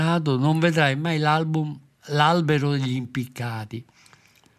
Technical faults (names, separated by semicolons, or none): none